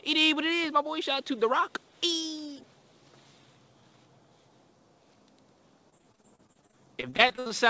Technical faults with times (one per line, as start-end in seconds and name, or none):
5.90-7.51 repeated packet loss (robotic sound)